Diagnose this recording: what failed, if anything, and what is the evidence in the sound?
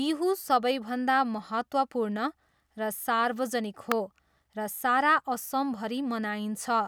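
A single sharp snap at 3.92 s, peaking around -10 dBFS over the speech, is most likely an electrical switching spike picked up in the analogue wiring from a nearby switch or discharge. Unlike a digital dropout click, the speech continues underneath without a gap.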